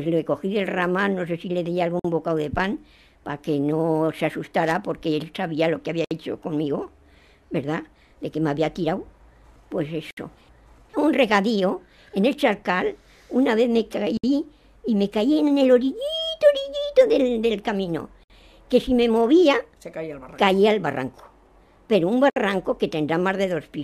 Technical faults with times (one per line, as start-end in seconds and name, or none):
2.00-2.05 gap at a join of encoded pieces
6.05-6.11 gap at a join of encoded pieces
10.11-10.17 gap at a join of encoded pieces
14.17-14.24 gap at a join of encoded pieces
18.24-18.30 gap at a join of encoded pieces
22.30-22.36 gap at a join of encoded pieces